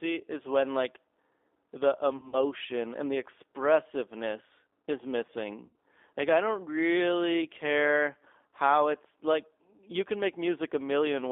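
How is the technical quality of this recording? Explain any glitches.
Quality is clearly degraded: a low-bitrate telephone codec colours the whole clip, and two brief dropouts are patched over by the codec's own concealment.

The G.729 codec runs throughout. The speech is rebuilt from a vocal tract filter, a pitch predictor and a few pulses per frame, which fits an 8 kbit/s G.729A stream. The result sounds rough and slightly synthetic. The line is limited to roughly 300 Hz to 3.6 kHz, so on a spectrogram energy stops sharply at about 3.6 kHz with an empty floor below 300 Hz, and the harmonics look smeared and grainy.

VoIP packet loss concealed by the speech codec occurs first from 2.17 to 2.36 s. About 100 ms of audio is missing, scattered across 160 ms, with a longest gap of 60 ms, which fits about five lost packets. The decoder extends its last pitch and filter settings while lowering the gain, so the sound is stretched out and fades. 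On a waveform the envelope sags into a smooth, repetitive stretch.

The second concealed loss runs from 5.65 to 5.75 s and covers about 100 ms, again consistent with roughly five packets. Here too the sound is stretched from the last frames and fades. Each frame builds on the previous one, so the audio stays weakened briefly after normal packets resume.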